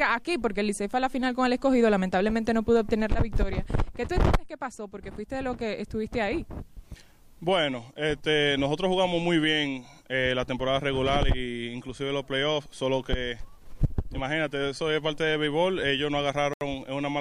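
At 16.54 s the sound drops abruptly to silence for about 76 ms, then resumes at 16.61 s, a brief hole near the very end of the audio. The pattern matches a Bluetooth stall: radio interference likely delayed the wireless packets, so the headphones' small playback buffer emptied and output simply stopped until the retransmitted audio reached the receiver and playback could continue.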